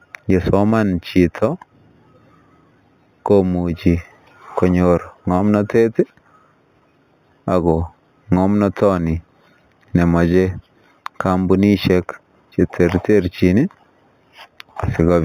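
A speech recording that sounds muffled at the top throughout, with a faint metallic shimmer riding on sibilants. This is imaging from linear upsampling. The dull band edge and the image between 4 and 8 kHz fit a source at 8 kHz raised to 48 kHz. Joining samples with straight lines filters poorly, so the upper band is softened while a mirrored copy of the spectrum survives, around 30 dB below the signal.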